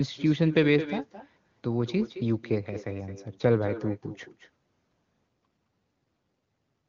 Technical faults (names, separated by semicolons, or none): echo with no canceller; AMR rate drop